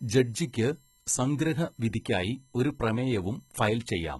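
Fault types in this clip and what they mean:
USB whine: Current drawn by the USB bus in 1 ms frames is leaking into the audio path through shared power or ground. This adds a fixed-pitch whine built on 1 kHz and its multiples, strongest at 7 kHz, sitting roughly 35 dB below the speech throughout.
HE-AAC compression: Heavy low-bitrate coding, likely HE-AAC at a rate that fits about 16 kbps, discards the true treble and rebuilds it by copying lower bands upward. Throughout the speech, the high end sounds synthetic and misaligned, and nothing remains above 11.8 kHz.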